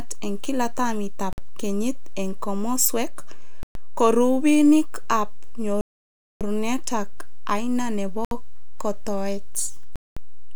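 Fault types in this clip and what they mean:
DC offset: the whole speech waveform sits shifted off zero for the entire clip, inaudible itself but using headroom; unlike hum, it is steady energy at 0 Hz with no pitch.
Bluetooth stall: speech cuts to pure silence five times, from 52 ms up to about 0.6 s, then resumes, likely from a drained headphone buffer. Dropouts are true silence, not concealment smear.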